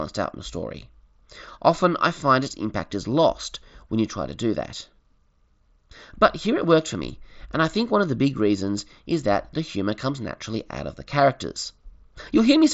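Nothing in this speech recording registers as a technical fault.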